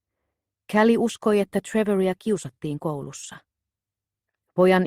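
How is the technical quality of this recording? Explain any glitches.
Three short network glitches come through near the end. Two are lost packets rebuilt from error correction. One is a short concealed packet loss.

At 3.01 to 3.03 s and 3.23 to 3.25 s, a packet went missing each time. The following packet held a low-bitrate backup, and the decoder played that 20 ms copy. Nothing drops out, but both moments turn briefly rougher and grainier.

At 4.31 to 4.35 s, 20 ms arrived too late and had no backup. The receiver carried the preceding sound forward for about 21 ms, then blended back into the real audio. It comes across as a quick smear or wobble.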